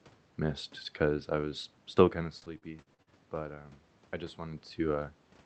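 Repeated packet loss (robotic sound) hits this speech clip from 2.39 to 3.10 s: five gaps, longest 46 ms, patched by extending prior audio, giving choppy speech with pieces missing.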